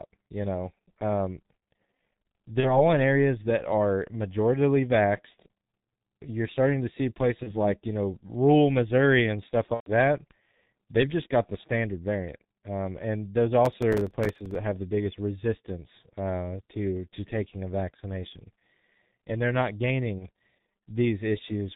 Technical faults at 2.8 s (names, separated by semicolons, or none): G.723.1 codec; VoIP packet loss concealed by the speech codec